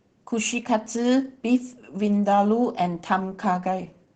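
Opus voice compression runs throughout: SILK coding caps the speech near 8 kHz and coarsely quantises excitation, fitting roughly 12 kbps, leaving it muffled, hoarse and faintly robotic.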